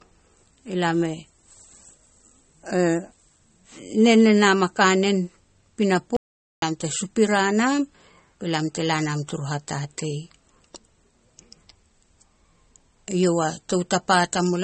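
A speech recording carrying two faults. Throughout, the spectrum stops dead at 8.4 kHz, and the band below carries the swirly, smeared texture of heavy MP3 coding, although the file itself is encoded at a generous rate. That combination is the signature of low-bitrate audio saved at a high bitrate, and it points to a source that was likely first squeezed to something like 32 kbit/s MP3 and then re-encoded at around 192 kbit/s. The second pass preserves the first pass's damage but cannot put back the discarded top end or clean up its artefacts. At 6.17 s the audio drops to digital silence, with no room tone at all, and resumes at 6.62 s mid-flow with "lam te supira nam", so about 0.46 s of speech is missing. This is an audio dropout to silence, most likely from the input feed being interrupted, through a lost link, a disconnect or a brief mute, while the recorder kept writing silence.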